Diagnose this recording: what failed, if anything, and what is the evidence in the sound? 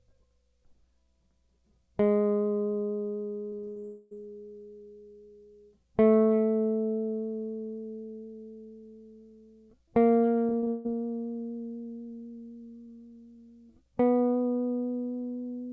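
At the network stage, packets were lost repeatedly over 3.50 to 3.85 s and 10.47 to 10.87 s, causing repeated packet loss with robotic sound. The receiver patched each hole by extending the previous sound, so the music turns choppy, with gaps up to 0.16 s.

From 3.85 to 4.15 s most of the music is replaced by a continued, smeared tone, with no silence, and it resumes slightly past where it left off. The likely cause is a long network dropout whose 0.26 s was filled by concealment.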